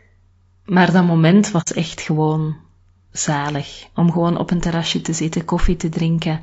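Throughout the speech, the likely cause is low-delay AAC compression of the AAC-ELD kind at a low bitrate, consistent with about 32 kbps. Coarse coding at that bitrate leaves the spectrum short of bits, so the speech sounds plainly rough and grainy, with noise between the harmonics and a thin, synthetic top band.

At 1.61 to 1.68 s, after "dat moment" and before "echt gewoon zalig", AAC frame loss with muting occurs. The decoder zeroed the missing spectrum, about 60 ms, consistent with two lost frames. Overlapping windows fade the sound out and back in, leaving a soft-edged hole.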